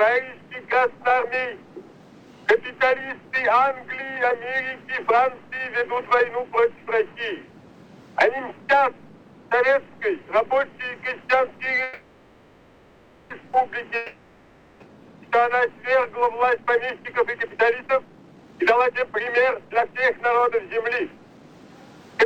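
A call audio freeze runs from 11.83 to 13.33 s. Packets were likely held up in transit, emptying the jitter buffer, so the receiver stretched the last sound into a fading buzz or hiss for about 1.47 s. Audio then resumes where it stopped, nothing lost, now about 1.47 s later.

A long network dropout follows from 13.96 to 14.83 s. Audio likely stopped arriving altogether, and the receiver again extended the last sound as a fading buzz or hiss over 0.84 s. When audio returns, those 0.84 s are simply gone, leaving a jump forward.

From 16.58 to 21.48 s comes a jitter buffer speed-up. With excess audio queued, the receiver repeatedly cut out short pitch-period slices, trimming about one and a half seconds in total. The sound plays at 130% speed with unchanged pitch, so it comes across as rushed.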